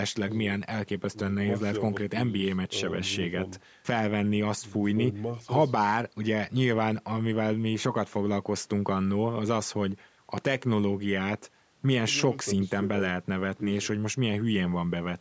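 No technical faults can be heard in this recording.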